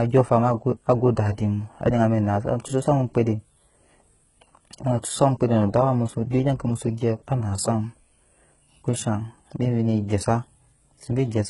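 Speech runs through all of the recording with heavy HE-AAC compression as the likely cause: s sounds come out gritty and lispy, and the upper range sounds synthetic rather than natural, which fits a very low bitrate near 12 kbps. The treble is rebuilt by copying lower bands upward, so its harmonics fail to line up with those beneath. On a spectrogram the top band shows blocky, repeated patterns, with nothing at all above 11.1 kHz.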